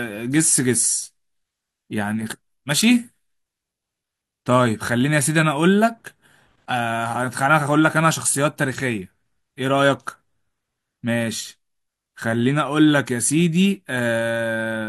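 No faults detected anywhere in this speech recording.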